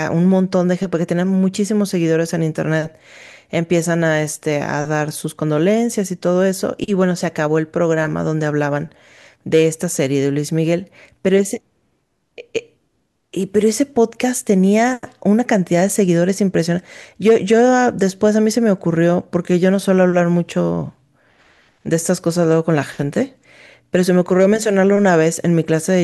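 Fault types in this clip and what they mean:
No fault types can be heard in this clip.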